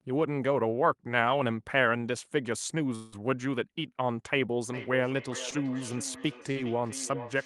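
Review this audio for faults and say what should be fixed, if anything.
From 2.95 s to 3.14 s the speech breaks off and a continuation of the last sound runs in its place for about 170 ms, fading as it goes but never reaching silence, before speech resumes with roughly 160 ms missing. The likely cause is a long network dropout: the receiver got nothing and extended what it last had. On a spectrogram the harmonics smear into a flat, decaying band and the waveform envelope sags. Larger jitter buffers or redundancy and forward error correction on the link would prevent it.

From 4.72 s to the end, each phrase comes back roughly every 0.4 s, thinner and more ringing, with the loudest repeat at about 13 dB below the speech. This is feedback echo between two devices: a second device in the same room on the same call replays the audio, and its echo canceller cannot remove sound that another device plays. 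A spectrogram shows faint copies of each syllable shifted by a constant interval, and the waveform shows small trailing bursts. Muting or removing the second device in the room would prevent it.

Two brief smears occur at 5.50 to 5.54 s and 6.52 to 6.57 s. About 20 ms and 40 ms of audio failed to reach the decoder in time, and the receiver bridged each gap with about 15 ms and 37 ms of synthesised continuation before blending back. This is short concealed packet loss. On a spectrogram the harmonics briefly blur or flatten, and the waveform shows a tiny repeated or softened segment. A steadier network path or in-band FEC would prevent it.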